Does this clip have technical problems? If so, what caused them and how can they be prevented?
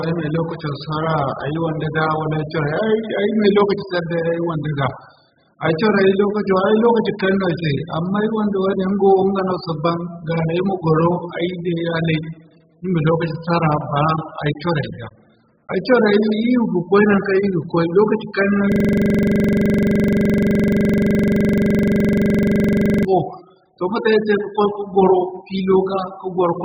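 Yes. Throughout the speech, the sound is dull, smeared and fizzy, with nothing above 5 kHz. This is likely AAC compression at a very low bitrate, around 8 kbps. The encoder discarded the upper band and coarsely quantised what remained, leaving warbling holes in the spectrum. Encoding at a higher bitrate prevents this.

From 18.72 to 23.05 s, the audio becomes a rapid repeating loop at 23.4 Hz. This is a system hang loop. The computer froze while the sound hardware kept replaying one 42.67 ms slice, which fits a 2048-sample buffer, about a hundred times. Keeping drivers stable and the audio thread from being starved prevents this.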